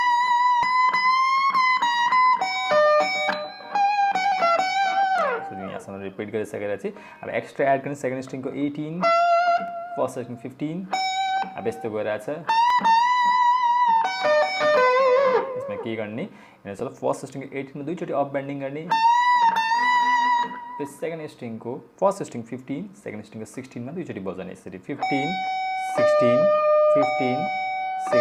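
At 0.63 s and again at 12.70 s, compressed frames are skipped: whole frames of the encoded stream never reach the output, so the audio leaps forward by roughly a tenth of a second each time. A spectrogram shows a vertical seam where the texture before and after fails to line up.

At 9.68 s a single sharp click marks dropped samples, likely a loss of only a handful of samples, around a tenth of a millisecond. That is far too little to remove any audible material, but the waveform steps abruptly from one value to a later one. On a spectrogram it appears as a thin vertical line running across the full frequency range.

At 16.8 s and 25.94 s there is a corrupt FLAC frame, each affecting a single frame. Flipped bits sent the decoder's prediction off course from the damaged point onward, adding an error burst that peaks at about -23 dBFS in the first case and about -34 dBFS in the second. Both are brief, the earlier one noticeably louder. 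The waveform shows a short spike or offset that ends cleanly once the next intact frame begins.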